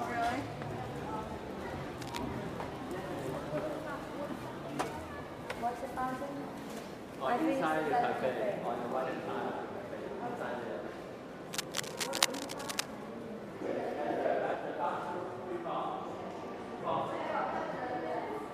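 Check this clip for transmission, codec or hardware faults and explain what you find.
Two faults are present: intermittent cable scratch noise in two stretches, and compressed frames skipped at five points.

Cable scratch noise appears from 2.02 to 2.18 s and again from 11.53 to 12.88 s. The likely cause is a worn cable, connector or control being disturbed, so its contact resistance fluctuates rapidly. That injects dense, irregular bursts of noise, heard as a scratchy rustle over the sound. The first burst sits about 10 dB below the signal. The second, longer one is roughly as loud as the signal itself.

Compressed frames skipped occur at 7.25, 9.03, 12.16, 14.54 and 16.79 s. Each time, the decoder drops whole frames and the audio jumps forward. The gaps are roughly 70 ms, 150 ms, 50 ms, 150 ms and 150 ms, which fits multiples of a 26.1 ms frame. The one at 12.16 s lands inside the second scratch burst.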